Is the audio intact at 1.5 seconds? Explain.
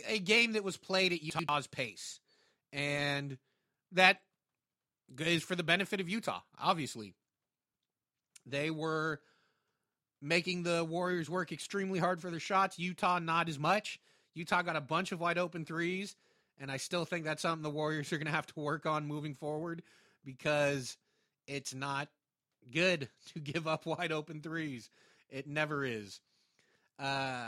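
No, not quite. Right around there, from 1.3 to 1.49 s, you get chunks out of order: one roughly 93 ms chunk landed a chunk late and plays after its successor. Nothing's missing, but the three hard joins make a brief jumbled stutter.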